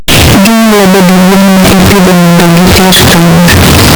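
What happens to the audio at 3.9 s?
At 3.9 s you're hearing the same thing that runs through the whole clip: a signed and unsigned mix-up, likely 16-bit samples read with the wrong sign convention. The top bit flips, so every zero crossing slams across the full range. That gives loud, harsh distortion where even quiet bits of the speech are as loud as everything else.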